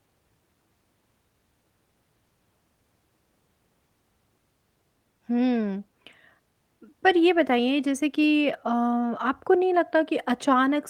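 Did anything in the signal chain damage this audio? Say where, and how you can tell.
No, nothing in the chain seems to have left a mark on this one; it's just speech with no damage I can pin to any stage.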